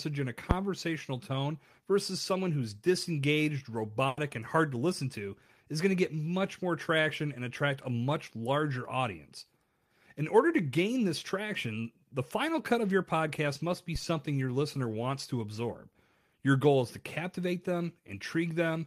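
A supply switched on or off on a live input at 0.51 s, just after "in a", sends a step through the coupling capacitors: a phantom power thump, a deep low thud dying away within about 20 ms before "tone versus someone who's" continues. At 4.07 s, after "versus someone who's disengaged", a burst of packet loss leaves the receiver stretching the last sound for about 100 ms, heard as that sound held and turned down, and then jumping ahead past roughly 100 ms of missing speech to "and hard to listen". A second phantom power thump arrives at 13.96 s, after "your podcast must be", with a thud that takes about 51 ms to decay before "your listener wants to".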